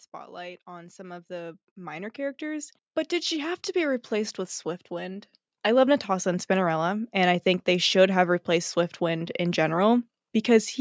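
From 0.33 s to 6.55 s, automatic gain rising is audible. The gain control judged the speech too quiet and kept turning it up, by about 19 dB overall. Voice and background noise swell together slowly, while the call's band-limited sound, topping out near 8 kHz, stays unchanged.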